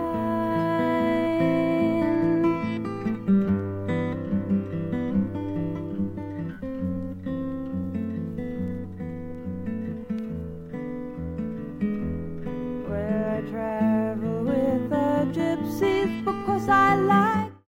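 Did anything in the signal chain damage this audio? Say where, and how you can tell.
No, nothing in the signal chain damaged this audio; the smooth fade out from about 17 s to 17.67 s is ordinary editing.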